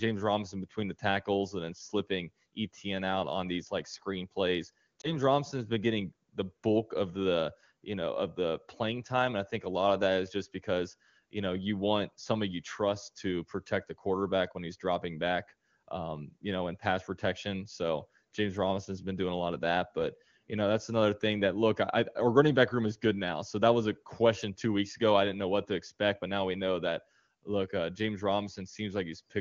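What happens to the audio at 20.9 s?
Nothing goes wrong at 20.9 s: the speech carries straight through that moment intact, passing through the AMR wideband (HD Voice) codec at its top rate of 23.85 kbit/s with at most a faint trace of coding.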